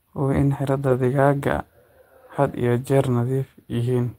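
Between 0.73 and 1.07 s, packets went missing and each was replaced by the low-bitrate copy carried in the following packet, a lost packet rebuilt from error correction. About 180 ms of speech plays through without a gap but sounds rougher and noisier.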